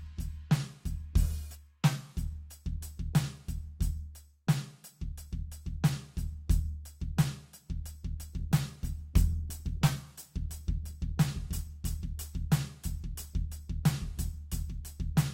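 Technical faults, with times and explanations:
8.41–12.31 s, call bitrate drop: the music goes coarse and watery, with the top end sounding dulled. That points to the call's bandwidth estimate collapsing and the encoder being told to spend far fewer bits, roughly from 64 kbps down to about 25 kbps. At that rate Opus quantises the music much more crudely and narrows the audio band. It sits at its worst for about 2.1 s before the bitrate climbs back and the detail returns.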